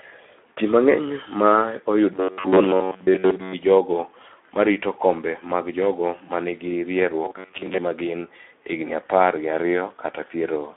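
From start to finish the speech carries Speex codec damage, with a hoarse, noisy grain that is plainly audible and fits a bitrate around 11 kbps. At that rate the excitation is coarsely coded, so voiced sounds lose their clean periodicity. The sound is confined to a telephone-like band of roughly 250 Hz to 3.6 kHz. A spectrogram shows empty space above 3.8 kHz and smeared, noisy harmonics within the band.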